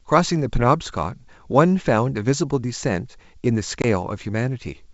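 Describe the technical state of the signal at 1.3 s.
At 1.3 s the speech is intact, carried on G.722 wideband telephone coding at 64 kbit/s with no fault at that moment.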